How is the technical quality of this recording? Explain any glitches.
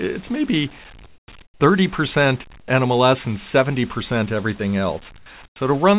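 The recording has telephone-band sound with nothing above 4 kHz, consistent with G.711 call coding, and short gaps where the background changes character.

Comfort noise in place of the background occurs at 1.06–1.28, 1.42–1.6, 2.6–2.68, 5.18–5.26 and 5.46–5.56 s. In these pauses the real background, about 28 dB below the loudest parts, drops out and a smooth, featureless hiss takes its place. It is about 12 dB quieter in the first four gaps and about 23 dB quieter in the last. This is likely the sender's voice detector halting transmission between phrases while the receiver synthesises noise to fill the gap.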